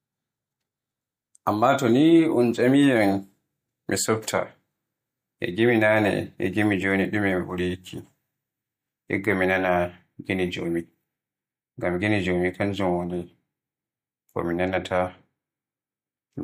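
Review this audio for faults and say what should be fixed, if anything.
Nothing stood out on listening to this speech clip, so there is nothing here that needs fixing.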